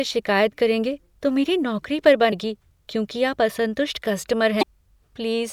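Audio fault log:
2.29–2.33 s and 4.59–4.63 s, damaged data in a compressed stream: corrupted frames desync the decoder, giving brief glitches that show as broadband smears and jagged waveform discontinuities.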